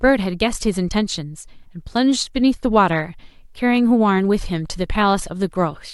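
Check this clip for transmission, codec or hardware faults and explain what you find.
No transmission, codec or hardware faults turn up in this clip.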